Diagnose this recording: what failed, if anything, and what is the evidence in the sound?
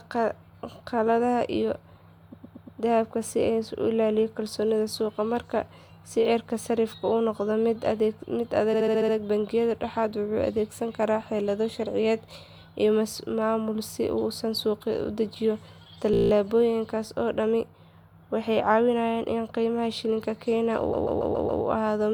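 Repeated frames, a codec or storage fault: blocks of 116, 70, 17 and 139 ms replay as stutters at 2.32 s before "dahabka si", 8.73 s, 16.13 s after "uu suuqa u dejiyo", and 20.92 s after "qiimaha shilinka". Unlike a dropout, nothing is lost; time is added.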